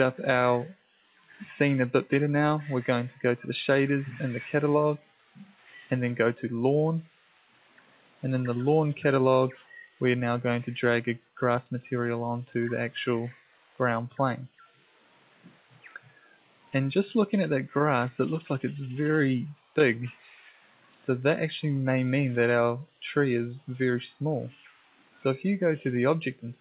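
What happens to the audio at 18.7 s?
Nothing goes wrong at 18.7 s: the audio runs on without a break, carried through the narrowband call path with its usual telephone-band character and nothing above about 4 kHz.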